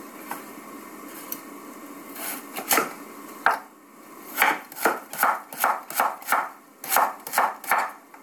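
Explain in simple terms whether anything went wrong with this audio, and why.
Nothing went wrong here; no faults can be heard.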